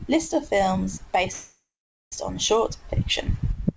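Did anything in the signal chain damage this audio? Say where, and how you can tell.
Yes. A call audio freeze runs from 1.32 to 2.14 s at the network and jitter-buffer stage. The last sound stretches into a fading buzz or hiss, then 0.48 s of silence, before speech resumes intact but 0.8 s late, likely from packets held in transit.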